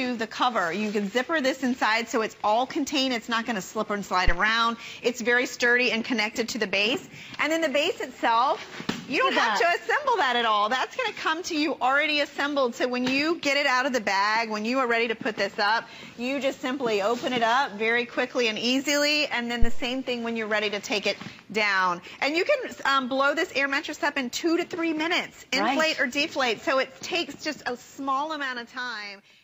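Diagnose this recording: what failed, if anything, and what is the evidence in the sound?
Phantom power thump at 4.28 s and 19.63 s, analogue input: thuds peaking about -9 and -7 dBFS from a supply step crossing coupling capacitors.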